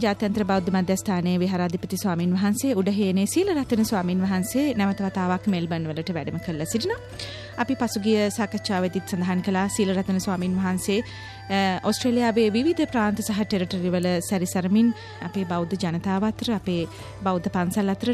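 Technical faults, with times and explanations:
14.03 s, electrical switching spike: a single sharp snap peaking around -20 dBFS sits on top of the sound, likely an arc from nearby switching picked up by the audio line.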